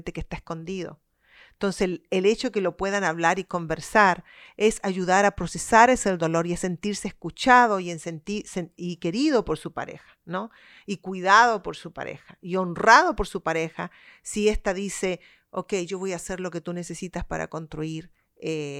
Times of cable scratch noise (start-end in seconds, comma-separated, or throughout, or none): none